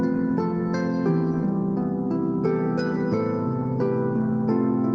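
No technical faults are audible.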